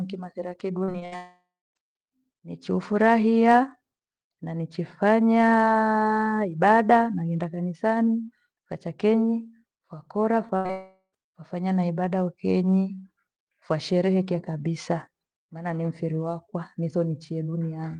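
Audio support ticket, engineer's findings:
Repeated packet loss (robotic sound), 0.83–1.14 s: choppy speech with pieces missing. Four gaps, the longest 62 ms, concealed across roughly half the span. Unlike a single burst, the holes recur in quick succession.

Long network dropout, 1.16–1.77 s and 10.71–11.15 s (the latter between "wacha kenyi wakora" and "wafanya na ibada"): likely a network outage. The concealment fades into about 0.29 s and 0.08 s of silence, and about 0.6 s and 0.42 s of speech are lost.

Short concealed packet loss, 10.47–10.51 s and 10.67–10.71 s, after "wacha kenyi wakora": brief smear or wobble at the decoder's concealment. About 20 ms is missing each time.

Burst of packet loss, 10.57–10.67 s: a held buzz or hiss that fades, with about 80 ms of speech missing. It is longer than the short losses, and the audio resumes further on.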